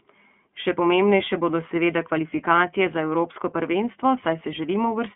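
Speech runs through the iLBC codec for its full length. The band stops near 3.5 kHz and below 200 Hz. Each 30 ms frame is coded on its own, so the sound turns rough and synthetic. The coarseness points to the 13.33 kbps mode.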